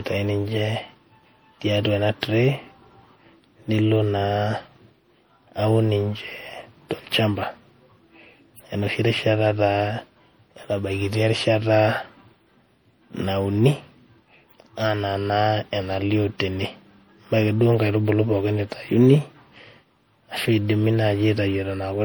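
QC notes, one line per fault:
Throughout, generation loss: likely repeated MP3 encoding, around five passes at something like 64 kbit/s, each requantising on a shifted frame grid so noise and spectral holes accumulate. The speech sounds swirly, smeared and hollow, consonant attacks blur, and nothing sits above 20.8 kHz.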